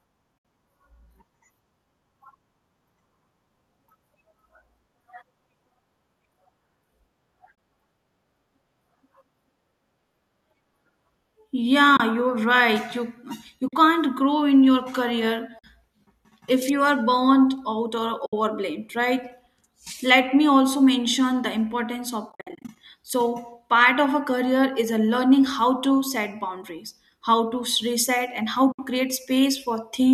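AAC frame loss with muting at 0.38, 7.55, 11.97, 13.68, 15.59, 18.26 and 28.72 s (30 to 70 ms holes), plus 22.30 to 22.76 s, where 270 ms is lost in runs of up to about 70 ms. Muted lost frames, likely in low-delay AAC, fade out and in softly.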